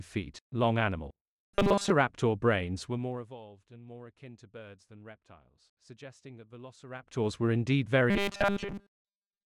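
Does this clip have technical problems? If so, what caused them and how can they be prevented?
Yes. From 1.55 to 1.92 s, and again from 8.10 s to the end at 9.46 s, the sound turns into a rigid, metallic buzz pitched at 200 Hz that only loosely follows the underlying audio. This is robotic sound from repeated short buffers, likely caused by audio arriving too slowly: the software kept looping the last 5 ms chunk, which sets the 200 Hz pitch, and skipped most of the real material. Larger buffers or a more reliable delivery path would prevent it.

Two level moves carry zipper noise. From 2.79 to 3.37 s, a fast ticking rides on the sound as it drops by about 20 dB. From 6.85 to 7.26 s, a similar ticking returns as the level rises by about 20 dB. Each change is applied in discrete jumps, at roughly 70 steps per second on the way down and roughly 100 on the way up, and every jump leaves a small click. 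Interpolating gain per sample, rather than per block, would prevent it.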